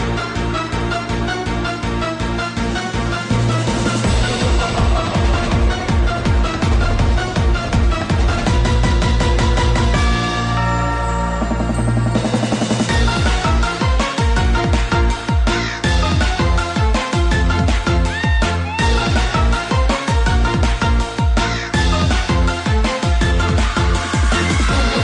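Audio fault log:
No faults can be heard anywhere in this recording.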